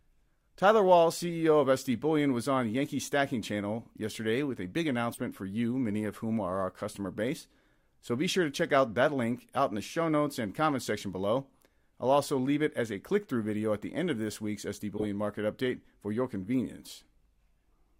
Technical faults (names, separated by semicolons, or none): corrupt frame decoded